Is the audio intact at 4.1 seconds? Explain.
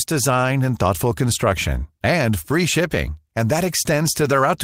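Yes, at 4.1 seconds the speech plays through intact, with no dropout, click or distortion.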